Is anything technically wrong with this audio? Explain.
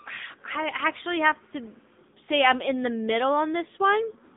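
Yes, two problems run through the whole speech clip.

First, a filter restarted on every block: the filter loses its state at each block boundary and starts from silence, so every block opens with a small click. Those clicks land 50 times a second, giving a steady 50 Hz buzz that swells and fades with the speech level.

Second, the AMR narrowband mobile codec is compressing it. The band sits at roughly 200 Hz to 3.7 kHz with nothing above 3.7 kHz, and the damage is plainly audible: buzzy, synthetic speech that fits an AMR-NB mode around 7.95 kbps.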